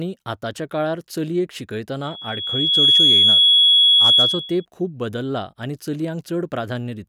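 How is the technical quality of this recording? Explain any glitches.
The recording has one clear fault, a loudspeaker feedback squeal. It begins at 2.03 s, just after "आतांच्या काळार चलयेक", and lasts until 4.65 s, ending just before "खूब बदल्ला आनी". The microphone was picking up a loudspeaker it was feeding, and at 3.4 kHz the loop gain went above one. That tone fed on itself, swelling over roughly three quarters of a second into a steady, piercing whistle that sits about 15 dB above the speech until the loop is broken.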